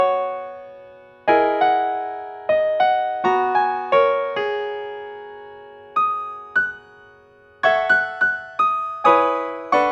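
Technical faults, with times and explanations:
Throughout, wrong sample rate: the audio runs at double speed and sits a full octave high, 12 semitones up, because the samples are being read out twice as fast as they were captured, which fits material recorded at 16 kHz and played back at 32 kHz. On a spectrogram every feature is squeezed to half its duration and shifted up to twice its frequency, and the waveform shows its events packed twice as tightly in time.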